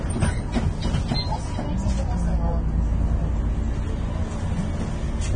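From start to finish the audio has a grainy, hissy top end, with tones sounding roughened and attacks smeared. That's likely Vorbis compression at a low setting, something around 24 kbps. Nothing survives above about 9.7 kHz, and the coarsely quantised treble below that turns fine detail into noise.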